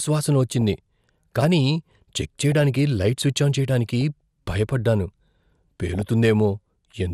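Speech, with a dull, band-limited quality and a gurgling, granular texture throughout: upper frequencies drop in and out and what remains sounds coarsely quantised. This is plainly audible MP2 compression, likely from MPEG Layer II at a low rate, which fits about 80 kbps. DAB burbling appears at 0.61–0.75 s, at 2.41–2.52 s between "కానీ చెక్" and "లైట్ స్విచ్ ఆన్ చేయటానికి", at 4.01 s just after "లైట్ స్విచ్ ఆన్ చేయటానికి", and at 5.87–6.02 s. These are bursts where bit errors at a fraction of a percent corrupted the sub-band data.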